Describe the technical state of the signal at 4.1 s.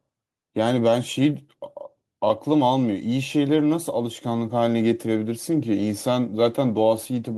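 At 4.1 s the signal is intact, with no dropout, distortion or other fault present.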